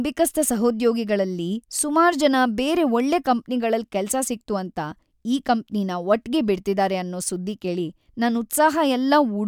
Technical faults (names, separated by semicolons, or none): none